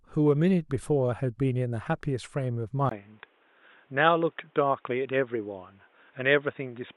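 Input switched to a poorer device at 2.89 s, likely. After a 20 ms gap, the speech turns dull and boxy through to the end, with nothing above 3.8 kHz, a faint new background noise well beneath it, and loudness essentially unchanged.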